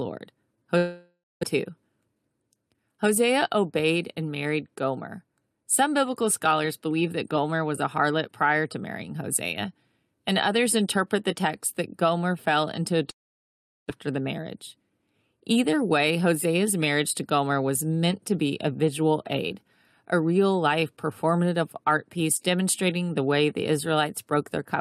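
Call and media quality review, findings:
Long network dropout, 0.77–1.45 s: speech stops, concealment buzz fades into about 0.19 s of silence, then resumes with roughly 0.6 s of speech lost. Likely packet loss upstream; playout delay shifts around 40 ms.

Jitter buffer speed-up, 2.01–2.30 s: speech hurried at unchanged pitch, 114% rate. Receiver trims pitch periods, about 50 ms total, to drain excess buffered audio.

Long network dropout, 13.10–13.92 s, right after "fell into": brief concealment, then about 0.74 s of silence. Roughly 0.6 s of speech missing on return; delay jumps around 200 ms.

Jitter buffer speed-up, 14.08–16.17 s: rushed delivery at steady pitch, 108% rate. Buffer overfilled after the gap; about 150 ms removed in repeated pitch-period cuts.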